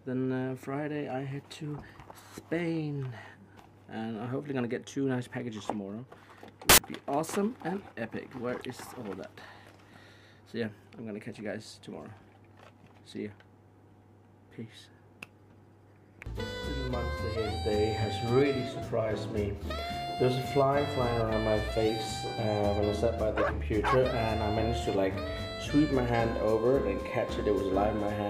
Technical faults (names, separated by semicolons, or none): samples built from the wrong bytes